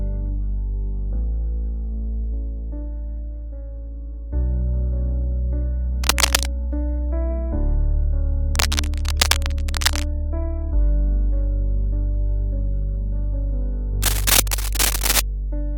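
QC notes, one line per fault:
6.03–6.46 s, 8.54–10.05 s and 14.02–15.20 s, cable scratch noise: dense, ragged bursts of crackle and rustle sit over the sound in three patches. The first and last are about as loud as the sound itself. The middle one is longer and a little quieter. The likely cause is a worn cable, connector or control being moved, so that its contact resistance jumps about and breaks up the signal path.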